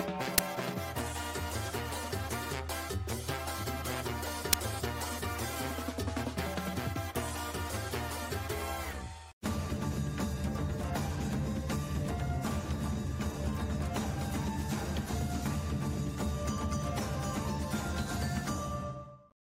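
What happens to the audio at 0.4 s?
An uninitialised buffer hits at 0.38 s: a block of about 10 ms was sent to the output before any audio had been written into it, so whatever stale data sat in that memory played as samples, giving a brief, loud crack.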